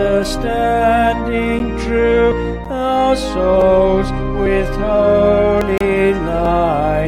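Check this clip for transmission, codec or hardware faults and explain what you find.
Two buffer-related faults occur: blocks of digital silence and skips consistent with dropped buffers.

Blocks of digital silence appear at 1.59 s and 2.65 s (each about 10.7 ms, which fits a 512-sample buffer), at 3.61 s (3.5 ms), and from 5.78 to 5.81 s (29.4 ms). The output was likely left unfilled, so the sound cuts abruptly to zero and back, heard as a tick or short hole.

At 2.32, 4.46, 5.61 and 6.45 s the sound jumps ahead without any silence, losing roughly 40 ms each time. The likely cause is a dropped buffer (overrun): the samples were overwritten before being collected, so the two sides butt together directly.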